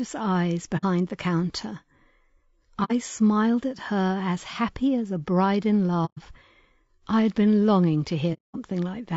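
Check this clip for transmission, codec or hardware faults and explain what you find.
The speech has two kinds of fault: codec damage throughout and four brief dropouts.

Low-delay AAC compression, throughout: the voice sounds rough and grainy, with noise filling the gaps between harmonics. This likely comes from AAC-ELD, whose short frames resolve pitch poorly, squeezed to a low bitrate around 32 kbps.

AAC frame loss with muting, at 0.77–0.84 s, 2.84–2.92 s, 6.05–6.18 s and 8.33–8.56 s: the sound fades into soft-edged silent holes, the last and longest lasting about 0.23 s. Lost frames were zeroed, and the overlapping windows taper the sound out and back in.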